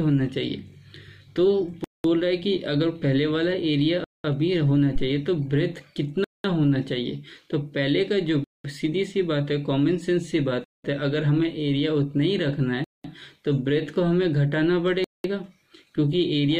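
The audio was delivered in 2-second chunks with 200 ms of silence inserted at each join. This gap between chunks produces hard-edged holes at 1.84, 4.04, 6.24, 8.44, 10.64, 12.84 and 15.04 s, a steady stutter roughly every 2.2 s. A supply was also switched on a live input, sending a voltage step through the coupling capacitors. The result is a phantom power thump at 4.96 s, a deep low-frequency knock that dies away within about 22 ms.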